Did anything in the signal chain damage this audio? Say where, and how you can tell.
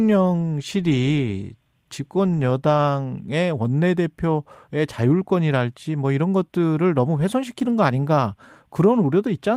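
No, nothing in the signal chain damaged this speech.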